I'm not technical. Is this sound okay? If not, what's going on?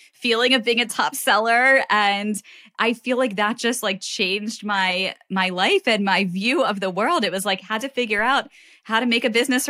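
No. At 8.19 s, just after "was like had to", there is a DC step: the recording's zero line suddenly jumps to a new level, then drifts back. You hear it as a single low thump, while the speech itself carries on unchanged.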